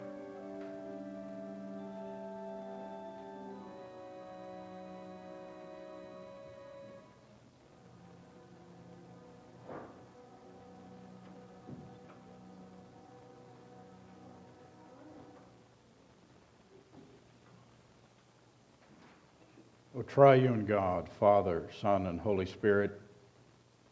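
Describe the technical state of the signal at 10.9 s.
At 10.9 s the signal is intact, with only the normal call microphone processing audible: the lowest bass is trimmed and nothing reaches above 8 kHz.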